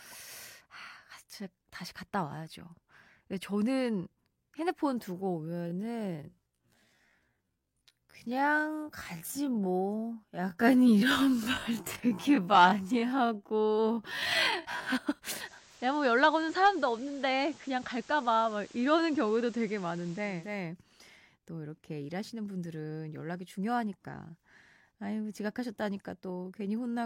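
Speech, with two faults. From 5.41 to 14.95 s the pace abruptly drops to 0.51 times normal speed while the pitch holds, leaving the speech dragging. This is likely a time-stretched section, where software padded the audio to fill a length by repeating short pieces. From 15.33 to 20.69 s the digital radio blending to analogue occurs. The receiver lost its digital stream and cross-faded over 471 ms to the FM broadcast, so hiss rises to roughly 25 dB below the speech, and the level dips by about 1 dB until it blends back.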